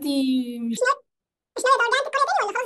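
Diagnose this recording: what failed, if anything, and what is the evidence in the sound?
From 0.77 s to the end, the speech jumps to double speed and a full octave higher, a sample-format conversion fault in which the audio is read two samples at a time, treating sample pairs as single frames.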